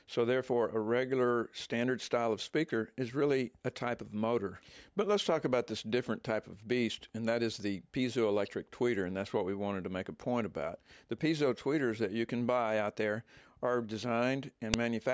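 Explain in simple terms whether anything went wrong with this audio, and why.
At 14.74 s, near the end, a single sharp, loud snap is heard: a file header played as audio. A joined-on piece kept its start-of-file data, which played as sound. Unlike a dropout click, it marks where a piece begins, regardless of the audio around it.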